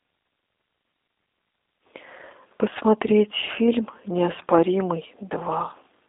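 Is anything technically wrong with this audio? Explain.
Yes, the whole clip has been through a G.729 codec, and the damage is easy to hear. It's speech squeezed into a telephone band of roughly 250 Hz to 3.7 kHz, with nothing at all above 3.7 kHz. The codec doesn't send the waveform; it rebuilds each short frame from a vocal tract filter, a pitch predictor and a few pulses. That's what you'd expect at 8 kbit/s, and it's why the speech sounds rough and a bit synthetic.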